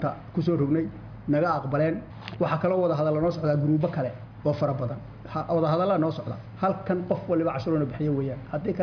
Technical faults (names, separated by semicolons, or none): none